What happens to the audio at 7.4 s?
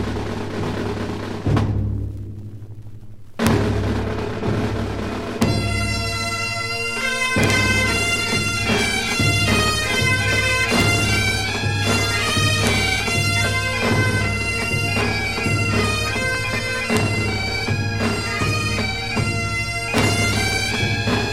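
At 7.44 to 7.50 s the audio hits integer overflow: a loud peak pushed the sum about 1 dB past the largest integer value, and instead of being limited it wrapped to the opposite sign. Each overshooting sample flips across the full range, producing a violent crack far harsher than clipping.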